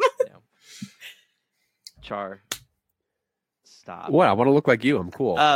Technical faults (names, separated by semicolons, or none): dropped samples